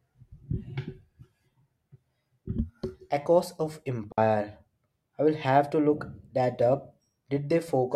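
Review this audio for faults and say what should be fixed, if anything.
A digital wireless dropout mutes the speech from 4.12 to 4.18 s. The receiver lost data and cut 60 ms to near silence, without noise. Keep the transmitter close, in clear line of sight, on an uncrowded channel.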